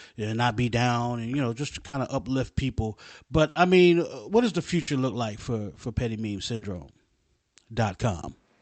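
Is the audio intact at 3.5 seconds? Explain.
No. From 3.49 to 3.58 s there is a burst of packet loss: about 60 ms of audio never arrived, and the receiver filled the gap by extending the last sound and letting it fade, so the speech smears into a brief held buzz or hiss before resuming further along. Unlike a plain dropout, the gap is never silent, and unlike a skip, it doesn't jump straight ahead without that decaying fill.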